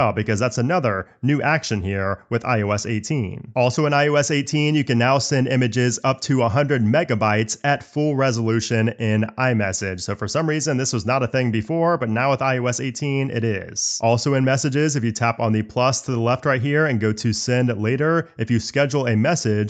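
Nothing is technically wrong with the clip; it has passed through a call's microphone processing and Opus path, with its content ending at 8 kHz.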